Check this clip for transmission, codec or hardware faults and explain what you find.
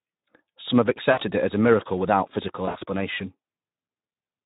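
Two faults are present: low-rate Speex coding throughout and two stretches of concealed VoIP packet loss.

Speex codec damage runs through the whole speech clip. With too few bits for the excitation, the voice sounds noisy and hoarse, with a plainly audible rough texture. The degree of damage fits a low Speex setting around 11 kbps.

VoIP packet loss concealed by the speech codec occurs from 1.11 to 1.21 s, just before "it as a miracle", and from 2.65 to 2.84 s, just after "a miracle without physical". The first gap covers 60 ms. In the second, 100 ms is lost across 160 ms, with the longest run lasting 60 ms. The decoder extends the last pitch and filter and lowers the gain frame by frame. Each gap is heard as a smeared, stretched sound that fades, and the voice stays weak briefly afterward.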